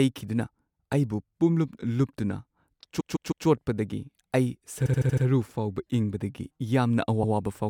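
The speech stutters three times, each from repeated frames: a run of compressed frames was stored or sent more than once, so the decoder replays the same slice of audio. From 2.99 to 3.46 s a 157 ms block plays three extra times, adding 0.47 s. From 4.85 to 5.24 s, just before "ꯐꯥꯎꯕ ꯏꯪꯕꯗꯒꯤ", a 78 ms block repeats five extra times, adding 0.39 s. At 7.22 to 7.33 s a 105 ms block plays once more, adding 0.10 s.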